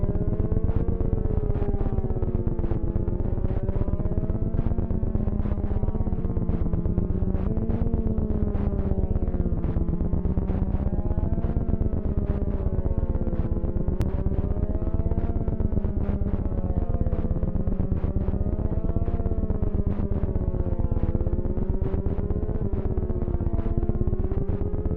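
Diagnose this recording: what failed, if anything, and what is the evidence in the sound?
The failure is at the codec stage: damaged data in a compressed stream. There are brief blips at 7.47, 11.24, 14.02, 22.61 and 24.32 s, each under 20 ms. Corrupted bytes made the decoder misread those frames and resync on the next header.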